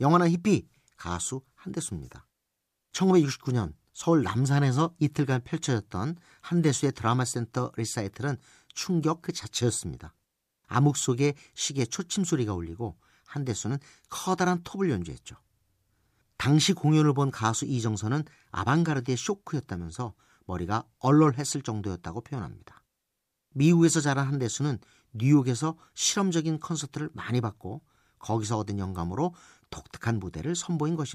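A speech recording with no audible technical faults anywhere in the signal.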